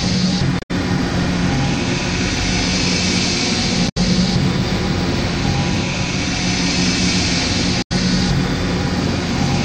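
Damaged data in a compressed stream occurs three times: from 0.56 to 0.71 s, 3.88 to 3.97 s and 7.82 to 7.92 s. In each stretch some of the encoded bytes were lost or overwritten, so the decoder misread the frames there, lost sync and had to hunt for the next valid frame header. Each time, the sound is disrupted for roughly a tenth of a second before normal decoding resumes.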